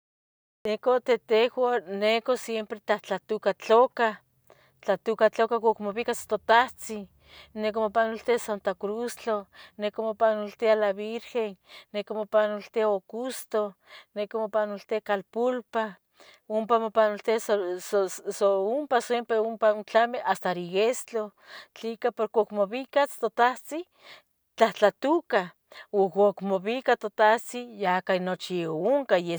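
Right at the top there's a cut-off start: digital silence until 0.65 s, then the speech jumps in mid-sound, with no natural attack because capture began late.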